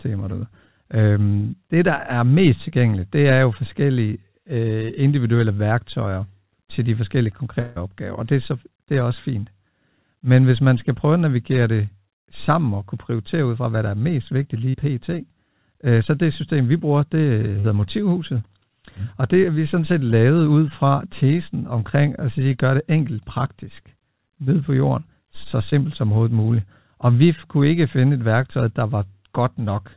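At 7.6 to 7.78 s, between "værktøjer til de forskellige" and "opgaver og det er", the sound is stretched into a fading buzz for about 0.16 s, then resumes with that stretch missing. This is likely a long network dropout: the receiver extended the last audio until packets arrived again.

At 14.70 s, just after "der er mest vigtigt", and again at 17.60 s, there is a brief smear of about 40 ms. At 25.70 s, between "ned på jorden så" and "som overhovedet muligt", a shorter 20 ms wobble occurs. Each is short concealed packet loss: the decoder covered the missing fragment by continuing the preceding sound, then blended back into the real audio. All of this sits within a narrowband call sound with nothing above 4 kHz, which fits a 64 kbps G.711 mu-law call path.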